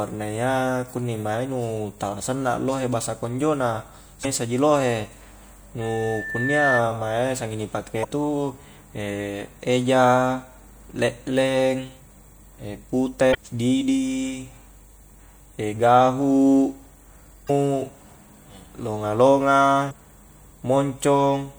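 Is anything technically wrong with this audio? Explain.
Yes, two kinds of fault are present.

Damaged data in a compressed stream appears five times, each lasting about 40 ms: 4.21–4.25 s (between "lohe bahasa konjo na" and "ji lohe"), 8.01–8.05 s (just after "mae sengi ni"), 13.31–13.35 s, 17.46–17.50 s and 19.89–19.93 s. Corrupted bytes in the encoded stream leave the decoder unable to read those frames, so it loses sync until it locks onto a valid header again. Each of these breaks in decoding comes through as a brief chirp or blip cutting into the speech.

A loudspeaker feedback squeal runs from 5.81 to 6.84 s, ending just before "mae sengi ni". A microphone picks up its own loudspeaker, and at 1.8 kHz the loop gain climbs past one, so that frequency keeps reinforcing itself. In this clip the tone swells over roughly a second into a squeal, rising to about 5 dB above the speech before it stops.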